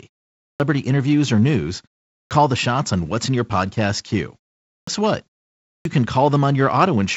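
At 0.37, 2.10, 4.64 and 5.63 s, each after a pause of 0.31 to 0.43 s, the speech restarts with its first 0.21 to 0.23 s missing: a clipped start after a pause, the output waking too late. Unlike simple pause muting, actual speech is swallowed.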